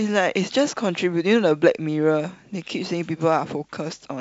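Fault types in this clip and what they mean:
No faults can be heard in this speech clip. The speech comes through G.722 wideband telephone coding at 64 kbit/s, which carries it clearly up to about 7 kHz with at most a faint hiss in the upper band.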